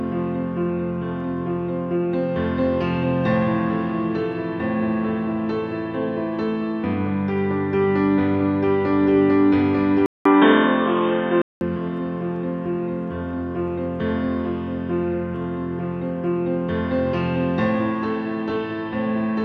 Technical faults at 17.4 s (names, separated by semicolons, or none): none